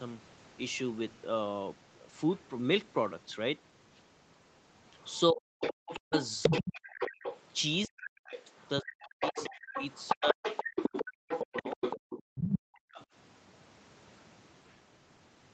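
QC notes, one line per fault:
5.08 to 13.04 s, other side's voice leaking through: a second voice runs under the talker for about eight seconds, only a few decibels below. It is likely loudspeaker echo left in the microphone signal. Unlike gating, this adds sound rather than removing it.
5.32 to 6.52 s, 7.87 to 10.43 s and 11.52 to 11.80 s, speech suppressed in double talk: the talker's own voice dips by as much as around 40 dB, in pieces, while the far side is speaking. The likely cause is the echo canceller pulling down both voices at once. Here the talker is lost, not just the room.
10.71 to 11.24 s and 12.23 to 12.92 s, background gated by the echo canceller: the room sound drops by about 40 dB in brief holes, roughly a fifth of a second and half a second in total, then returns once the canceller releases. These dips hit the background rather than the talker's voice.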